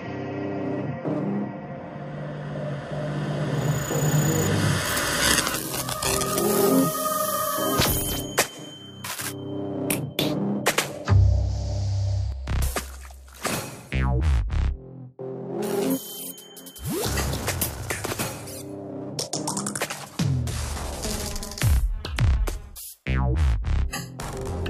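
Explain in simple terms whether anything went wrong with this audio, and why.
At 12.32 s the sound abruptly turns noticeably quieter and stays that way until the end. This is likely one channel dropping out: one side of the stereo signal went silent, so the combined playback lost part of its strength.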